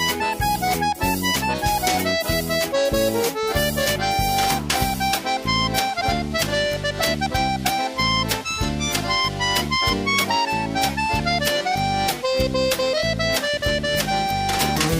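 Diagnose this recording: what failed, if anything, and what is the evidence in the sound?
A steady, raspy 217 Hz buzz from 4.64 to 6.50 s, about 21 dB below the signal: GSM phone buzz, call bursts rectified in analogue wiring.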